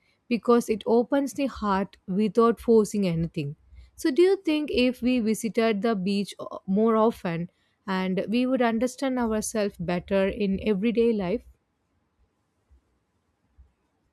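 No technical faults can be heard in this speech recording.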